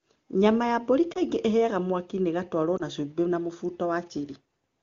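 Speech, with lost AMR speech frames at 1.13–1.18 s after "ya mbũri" and 2.78–2.82 s before "na cumbĩ". Each is a brief dip or warble consistent with one concealed 20 ms frame, not the hard gap of a dropout.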